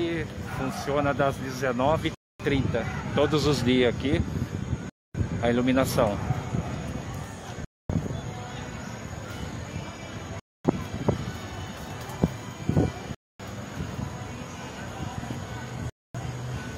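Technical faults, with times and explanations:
2.15–2.40 s, 4.90–5.15 s, 7.65–7.90 s, 10.40–10.65 s, 13.15–13.40 s and 15.90–16.15 s, gap between chunks: the sound drops into hard-edged silent holes of 250 ms every 2.75 s. Each 2.5 s block of audio plays intact, but silence is inserted at every join.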